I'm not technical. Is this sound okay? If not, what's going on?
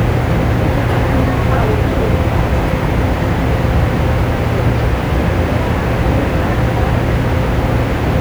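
No. A steady, even hiss runs under the sound for the whole clip, start to finish. This is low bit depth with dither: the audio keeps only about 7 bits of detail, and the added dither turns the rounding error into a fairly prominent hiss rather than distortion.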